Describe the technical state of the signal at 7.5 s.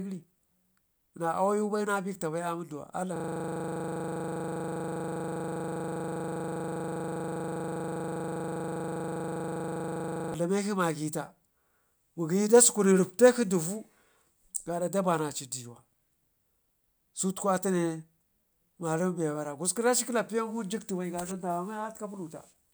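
At 7.5 s the speech is caught in a system hang loop, running from 3.16 to 10.34 s. The system stalled while the audio hardware kept replaying one 40 ms piece of its buffer. The result is a rough, steady 25 Hz buzz.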